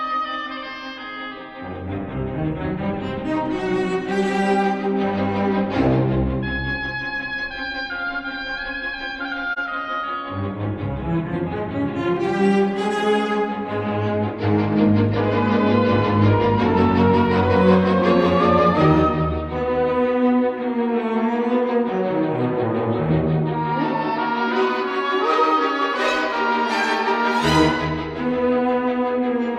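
At 9.53 s, AAC frame loss with muting leaves a soft-edged dropout of about 60 ms, consistent with one lost frame whose spectrum the decoder zeroed before overlapping windows faded the sound back.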